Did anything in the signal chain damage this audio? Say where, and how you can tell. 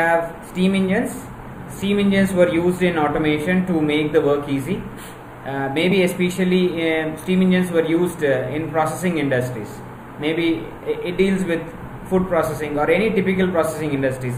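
Yes: compressed frames were skipped at the codec stage at 5.91 s. Roughly one 20 ms frame never plays, so the audio jumps ahead.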